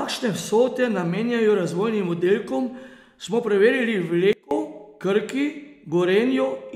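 At 4.33 s there's a sudden gain jump: the speech and the background noise both drop by about 24 dB in a single step and stay down until 4.51 s. That's likely a gain setting applied instantly, with no ramp to smooth the change.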